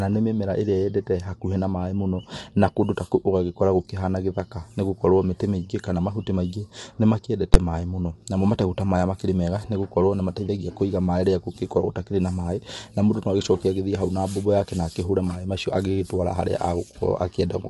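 Throughout the speech, the signal has likely passed through low-delay AAC compression of the AAC-ELD kind used for video calls. Its very short frames give the encoder too little time to resolve the voice's harmonics, and the bit budget, consistent with roughly 32 kbps, runs thin. The voice comes out plainly rough and grainy, with noise filling the gaps between harmonics, and nothing is present above 11.6 kHz.

At 7.54 s, a calculation produced infinite or invalid numbers, and the output was forced to full scale for one block of 11.61 ms, which fits a 512-sample block. Because the block is so short, the entry and exit jumps merge with the pinned section between them, so the listener hears a single very loud bang rather than two separate pops.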